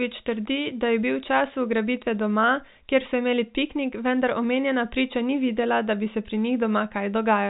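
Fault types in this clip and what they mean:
No faults can be heard.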